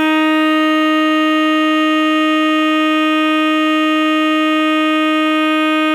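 No technical faults can be heard anywhere in this music clip, and the signal stays steady and intact throughout.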